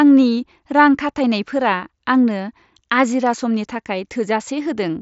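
Speech clip with no faults to report; the audio carries nothing above about 7.7 kHz, consistent with a Bluetooth mSBC headset codec.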